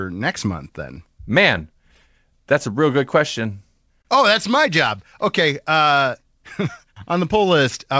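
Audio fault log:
4.02–4.07 s, short stall from a late packet: a packet missed its slot and the jitter buffer emptied, so 28 ms of sound was stretched and held too long before playback resumed with nothing lost.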